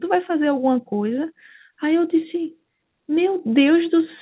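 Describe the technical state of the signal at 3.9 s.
At 3.9 s the audio is intact, with no fault present, only the narrow call-path band that carries nothing above 4 kHz.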